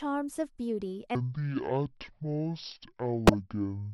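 At 1.15 s the speech drops to half speed and stays there to the end of the clip, a section at the wrong speed. Pitch falls with the tempo, by about ten semitones, so the voice turns deep and drawn out, with consonants smeared and pauses stretched. Because speed and pitch move together, this is a playback-rate error rather than pitch shifting. The likely cause is that this stretch was played or resampled against the wrong clock.

From 3.27 s to 3.34 s, inside the slowed section, a corrupt frame is decoded: a short, harsh burst of misplaced energy peaking around -10 dBFS cuts across the speech as a squeaky, noisy blip. Its roughly 70 ms span points to a few consecutive compressed frames with flipped bits that the decoder played anyway. Their misread gains and codes put energy at frequencies unrelated to the voice.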